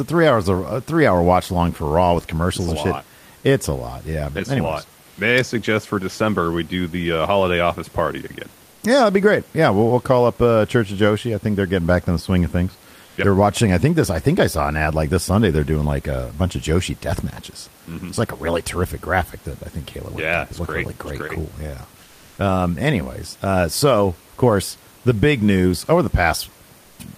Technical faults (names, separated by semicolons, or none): comfort noise in place of the background